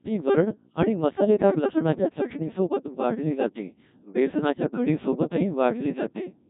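A speech clip passed through the Codec 2 vocoder for its whole length, with heavy damage that points to a very low rate near 1.6 kbit/s. Only pitch, voicing, energy and a spectral envelope survive; the voice is rebuilt from sine waves, sounding robotic and buzzy, with nothing above 3.8 kHz.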